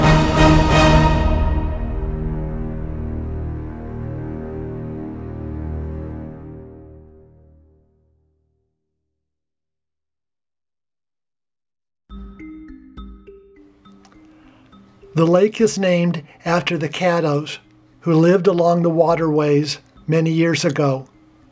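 No technical faults are audible.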